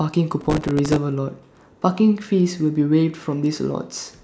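From 0.41 to 0.96 s, processor overload crackle: gritty tearing over the speech, consistent with dozens of missed buffers of about 2 ms, each filled with repeated stale audio.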